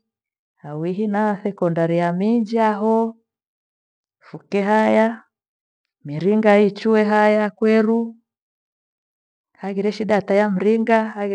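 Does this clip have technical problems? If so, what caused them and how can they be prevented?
No, there are no technical problems to report here.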